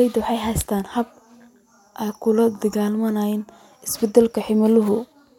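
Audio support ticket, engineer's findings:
No fault found in this speech clip; nothing to attribute to any component.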